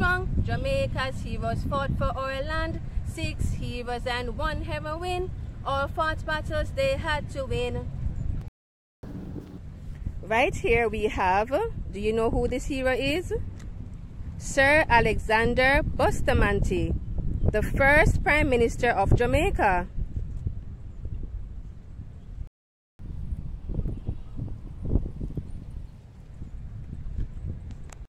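Playback stalls hit at 8.48 s and 22.47 s, where the audio cuts to silence in mid-flow for about 0.55 s and 0.52 s, likely because the player ran out of buffered data or its thread was blocked, before it resumes from the point where it stopped. Catch-up at higher speed follows each stall as the player resamples its backlog to win back the lost time: from 9.03 to 9.58 s it runs at 2× speed, roughly ten semitones sharp, and from 22.99 to 25.99 s at 1.15×, about two semitones up, before dropping back to normal speed and pitch.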